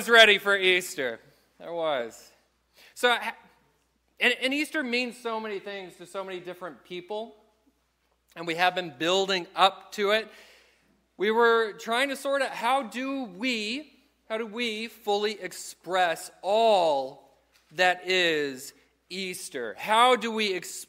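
There are no technical faults to describe in this audio.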